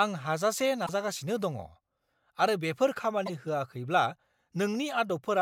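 A speech recording with two short glitches: one from 0.82 to 0.89 s, right after "आं हाजासे", and another from 3.23 to 3.30 s, after "आरो बेफोर". Both come from damaged data in a compressed stream, where corrupted bytes made the decoder misread frames and lose sync before finding the next valid header.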